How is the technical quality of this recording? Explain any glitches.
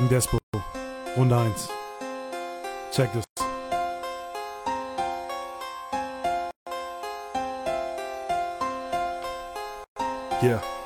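The recording has four dropouts, evenly spaced about every three seconds. They're gaps at joins of encoded pieces: at 0.38 to 0.54 s (153 ms), 3.24 to 3.37 s (128 ms), 6.51 to 6.67 s (157 ms), and 9.84 to 9.96 s (122 ms). Each piece was encoded separately and butted together untrimmed, so the encoder's start-up delay and end padding leave a hole of silence with smeared edges. The sound then picks up where it stopped.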